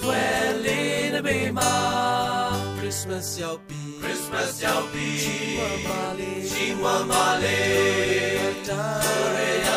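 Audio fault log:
4.35 s and 5.45 s: dropped samples, likely. Each time there is one sharp click, with nothing else disturbed around it. The cause is likely a tiny gap in the stream. A handful of samples, about a tenth of a millisecond, seem to go missing. The waveform then jumps from one value straight to a later one. That sudden step is the click. The gap is far too short to remove any audible sound.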